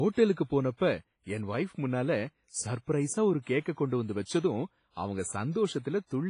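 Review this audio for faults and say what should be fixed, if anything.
The whole clip carries heavy WMA compression damage. The speech sounds washy and ringing, with hiss that swells and fades with the signal. Nothing remains above about 10.1 kHz. This fits a low bitrate near 24 kbps, likely from a WMA encode.

Pre-echo appears from 0.33 to 0.37 s. A short hiss runs about 36 ms ahead of a sharp attack. The codec spread its block's quantisation noise into the quiet gap before the onset, so the attack sounds soft and smeared.

To prevent both, re-export from the original source with a higher bitrate or a modern codec that switches to short blocks on transients.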